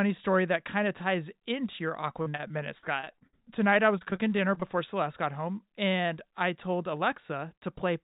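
Repeated packet loss from 2.22 to 3.48 s and again from 3.98 to 4.64 s: audio kept going missing, and gaps of up to 57 ms were patched by stretching the last sound. The speech turns choppy and robotic.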